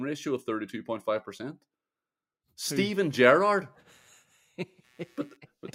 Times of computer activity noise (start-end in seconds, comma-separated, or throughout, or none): 3.30-5.37